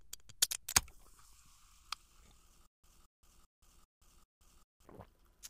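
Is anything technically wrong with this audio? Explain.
Yes. From 2.66 to 4.85 s a stutter with silent gaps: a 220 ms burst repeats five times, every 393 ms, separated by 174 ms of digital silence, likely a stalled stream replaying its last buffer.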